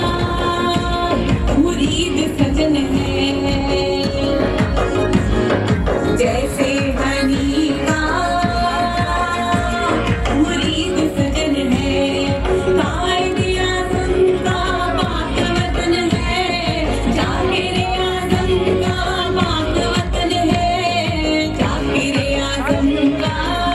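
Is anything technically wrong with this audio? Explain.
No technical faults detected.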